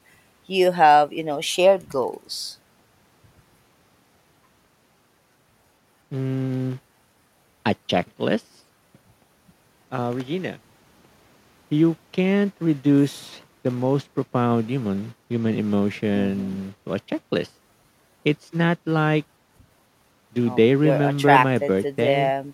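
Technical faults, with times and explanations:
Nothing to flag here; the speech comes through without any technical trouble worth pointing out.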